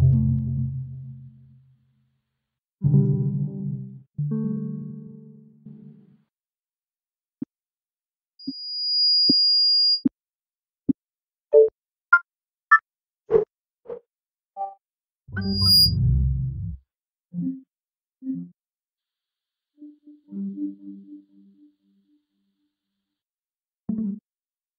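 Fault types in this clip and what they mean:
Loudspeaker feedback squeal: the mic is picking up its own speaker, and at 4.8 kHz the loop gain goes past one, so that tone keeps feeding itself. It swells in slowly around 8.4 s, then returns near 15.4 s, quicker and louder, well above the sound.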